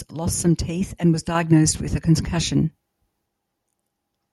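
At 1.35 s the microphone volume is stepped up. The call software judged the input too quiet and raised the device gain in a single jump of about 5 dB. Speech and background noise get louder together, abruptly.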